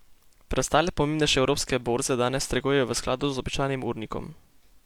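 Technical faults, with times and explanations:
No technical faults can be heard in this speech recording.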